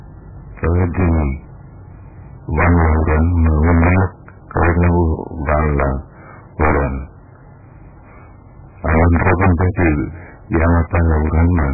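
Heavy MP3 compression runs through the whole speech clip. Nothing survives above 2.5 kHz. The sound is dull, watery and swirling, with smeared attacks. Weak frequency lines flicker from frame to frame. The damage likely points to a very low bitrate, around 8 kbps.

Integer overflow strikes at 2.58 to 4.05 s, 4.57 to 5.04 s, 5.49 to 5.88 s, 6.61 to 6.86 s, 8.89 to 9.89 s and 10.54 to 11.68 s. Peaks exceed the limit by about 6 to 10 dB. Instead of clipping, they wrap to the opposite sign. Each one is a violent, harsh crack.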